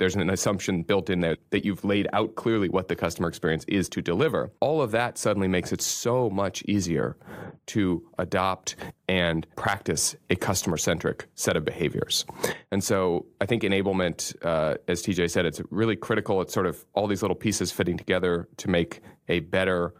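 Nothing here stands out as a technical fault; the speech carries on without any glitch, dropout or distortion worth pointing to.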